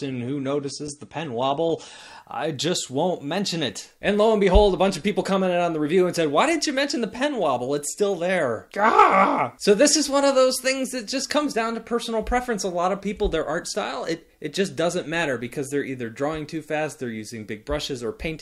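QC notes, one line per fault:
0.00–2.00 s, adaptive stream starting at a low bitrate: nothing above about 9.8 kHz and stronger codec artefacts, then quality jumps with no gap, which fits a switch from roughly 32 to 96 kbit/s.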